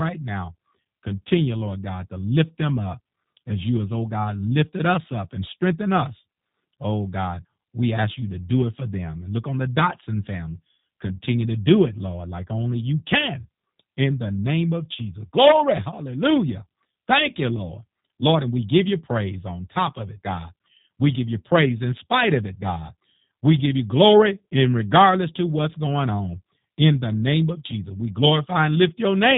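From start to finish the speech carries the sound of the G.729 codec, in its G.729A form, at a rate that fits 8 kbit/s. The coder models each short frame as a vocal tract filter plus a pitch predictor and a few sparse pulses, so the damage is plainly audible: the speech sounds rough and slightly synthetic. The band is cut off at about 3.8 kHz, which leaves consonants dull and lacking air.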